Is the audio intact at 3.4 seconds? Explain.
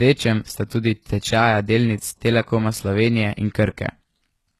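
No. At 3.4 s, as throughout the clip, the speech carries plainly audible damage that is likely HE-AAC compression at a low rate, around 16 kbps. The treble stops near 12.3 kHz, and s sounds turn gritty and metallic. A plain low-pass would sound dull. Here the top stays bright but is copied up from lower bands, so its harmonics don't line up with the real ones.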